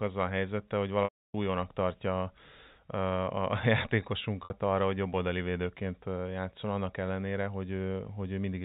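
Speech over a G.711 telephone line loses packets twice, and the receiver fills each gap with packet loss concealment by pitch repetition, looping the last pitch period. At 1.04–1.34 s (300 ms) it buzzes, fades to silence, then cross-fades back; at 4.44–4.50 s (60 ms) it just sounds slightly held.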